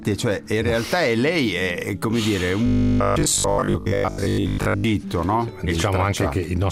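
Robotic sound from repeated short buffers runs from 2.66 to 4.84 s, where the audio turns into a rigid, metallic 50 Hz buzz. Most of that stretch is likely a 20 ms segment replayed whenever fresh audio arrived late, replacing the skipped material.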